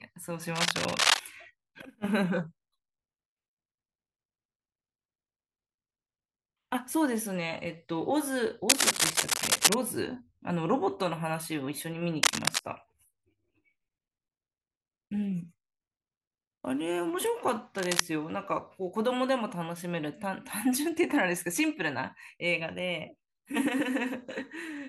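A worn cable or connector likely shifted, its contact resistance jumping about, causing cable scratch noise: rough, uneven scratching over the speech at 0.55–1.2, 8.69–9.74 and 12.23–12.59 s, about 5 dB above it, then level with it at 17.76–18.01 s.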